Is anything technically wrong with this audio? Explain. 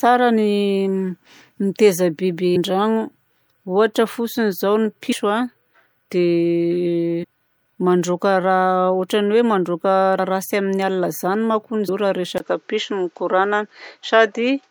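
Yes. Compressed frames skipped at 2.55, 5.11, 7.23, 10.18 and 11.88 s: whole 26.1 ms frames go missing, so the speech jumps ahead by roughly 150, 100, 400, 70 and 150 ms, each join a brief smeared blip.

Input switched to a poorer device at 12.38 s, likely: after a 20 ms gap the sound turns duller, with nothing above 7.6 kHz and new background noise about 45 dB down, at roughly the same level.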